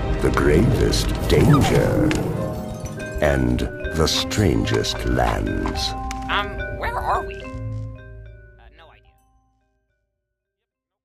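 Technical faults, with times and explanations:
No technical faults are audible.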